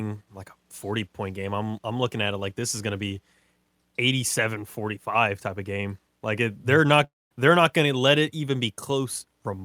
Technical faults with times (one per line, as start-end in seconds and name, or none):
7.04-7.32 long network dropout